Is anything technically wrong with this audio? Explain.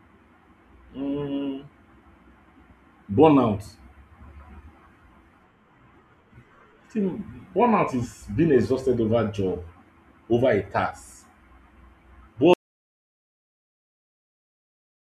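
Yes. At 12.54 s the speech is cut off in mid-flow by an audio dropout to silence that lasts the final 2.5 s to the end. The input was likely lost, through a disconnected device, failed link or accidental mute, while the recorder kept writing silence. What separates this from a natural pause or a fade-out is the abrupt cut to silence, with no room tone or background hiss left underneath.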